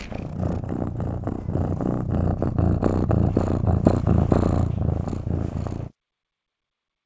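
No faults can be heard in this recording of everyday sounds, which reaches the listener through a working call connection whose codec leaves nothing above 8 kHz, a band limit that fits wideband G.722 at 64 kbps.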